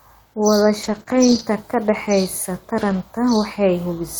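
From 0.83 to 1.01 s the speech turns rough and grainy, with added noise. This is a lost packet rebuilt from error correction: the decoder played the low-bitrate backup copies carried in the following packets. About 100 ms was rebuilt, which fits roughly five packets.

Between 1.03 and 1.07 s there is a brief smear. This is short concealed packet loss: about 20 ms never arrived in time, and the receiver covered it by extending the preceding sound before blending back.

From 1.07 to 1.41 s, just before "ka dhaxaysa", the same coarse, noisy texture returns. Again the packets were rebuilt from the error-correction copies, covering 180 ms, which points to about nine lost packets.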